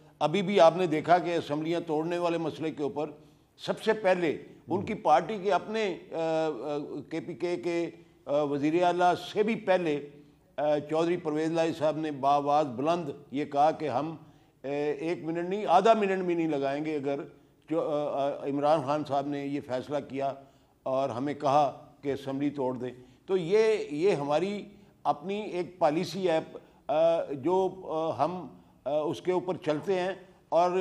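Nothing goes wrong anywhere in this one; it's an uneventful listen with no technical trouble to point to.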